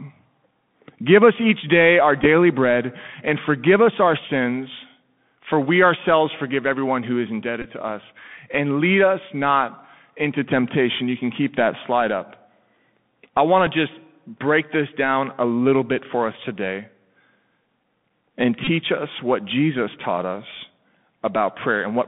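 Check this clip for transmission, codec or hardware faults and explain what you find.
Two faults are present: the whole clip carries Bluetooth CVSD headset codec damage, and there are four brief Bluetooth headset packet repeats.

Throughout the speech, the sound is thin and boxed in, with nothing below about 150 Hz or above 3.5 kHz. S sounds turn scratchy, louder bright passages distort, and a fine granular hiss sits underneath. This is the Bluetooth CVSD headset codec. It sends one up-or-down bit per sample, which fits a 64 kbit/s link, and its adaptive step cannot keep pace with fast, loud high-frequency movement.

Bluetooth headset packet repeats cause short buzzy or ticking blips at 2.22–2.26 s, at 7.62–7.66 s between "forgive everyone who is" and "to us and lead", at 13.67 s between "I want" and "to just break this", and at 18.65–18.67 s just before "us what". When voice packets are lost, the chip decodes the previous packet's bits again. 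A single repeat, as at 13.67 s, is only a tick. At 7.62 s a run of about 20 ms repeating every 3.75 ms gives a brief buzz near 267 Hz.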